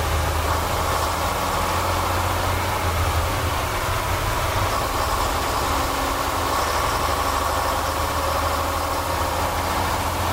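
From the start, the whole clip carries grainy distortion that rises and falls with the sound and sits only about 15 dB below it. The likely cause is low bit depth without dither, with values rounded to about 4 bits. On a waveform, quiet passages appear as coarse stair-steps, and a spectrogram shows broadband hash tracking the signal.

At 3.22 s, compressed frames are skipped. A few frames, roughly a tenth of a second of audio, never play, so the sound jumps ahead.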